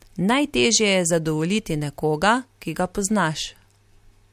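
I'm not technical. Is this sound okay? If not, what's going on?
Yes, nothing in this recording points to a technical problem with how the sound was captured or carried.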